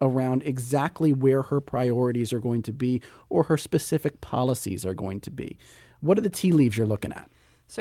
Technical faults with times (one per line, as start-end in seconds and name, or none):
none